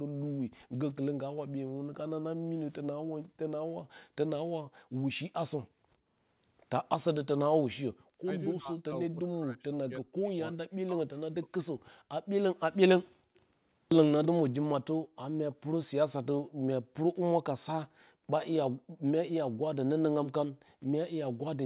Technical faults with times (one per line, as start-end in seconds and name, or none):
0.03-0.22 background gated by the echo canceller
2.37-2.48 background gated by the echo canceller
4.71-6.08 background gated by the echo canceller
8.23-12.07 speech suppressed in double talk
13.17-13.34 background gated by the echo canceller
13.34-15.55 echo leak
15.05-19.03 background gated by the echo canceller